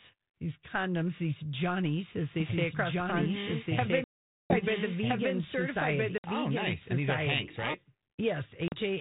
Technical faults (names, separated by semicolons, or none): doubled audio track; packet loss on an ADPCM call